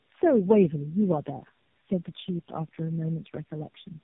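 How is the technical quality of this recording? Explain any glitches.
The quality is poor throughout. Tandem speech coding runs the whole clip. Three low-rate speech codecs were chained. Each recoded the last one's damage. The speech sounds rough, muffled and warbly, with nothing above 3.8 kHz.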